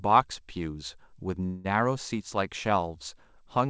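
At 1.46–1.66 s, a call audio freeze, likely from jitter-buffer underrun: a 185 ms fading buzz, smeared bands on a spectrogram, then speech resumes intact.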